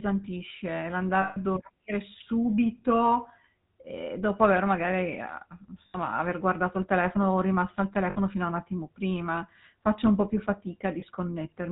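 Speech heard through the GSM full-rate codec, with plainly audible damage throughout. The sound has the codec's buzzy, gravelly texture and nothing above 4 kHz, which fits 13 kbps full-rate coding. The codec models the vocal tract as a filter and excites it with a regular pulse train in which only every third excitation sample is kept. That coarse excitation produces the roughness, and the narrow band dulls the sibilants. There are also lost GSM frames at 1.22 to 1.37 s (about 140 ms), 5.86 to 5.97 s (about 80 ms), 8.1 to 8.17 s (about 60 ms) and 11.0 s (about 20 ms). At each gap the decoder replaces the missing frames by repeating the parameters of the last good frame. This holds the sound as a brief rough, metallic ring instead of a clean dropout. The ring is longest at 1.22 s and shortest at 11.0 s.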